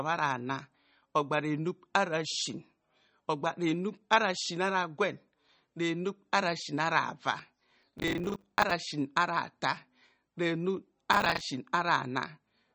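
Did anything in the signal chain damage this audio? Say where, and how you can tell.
Yes. MP3 compression runs throughout the speech at the codec stage: nothing remains above 8.3 kHz, and the plainly audible watery, swirly smearing points to a low bitrate near 33 kbps. The likely cause is an encoder cutting the treble and zeroing weak frequency lines frame by frame.

Processor overload crackle, at the driver or buffer stage, occurs at 7.82–8.71 s and again at 11.13–11.41 s as gritty tearing. Dozens of buffers, each roughly 10 ms, missed their deadlines and were filled with repeated old audio, leaving hard-edged splices.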